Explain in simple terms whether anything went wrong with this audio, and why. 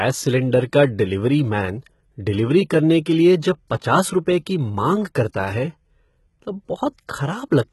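HE-AAC compression, throughout the speech: the treble sounds gritty and lispy, with nothing above 11.8 kHz. This likely comes from HE-AAC, which rebuilds the high frequencies by copying lower ones upward.

Pre-echo at 5.33 s: a brief hiss comes just before a sharp attack because the codec's noise spreads into the quiet moment ahead of it.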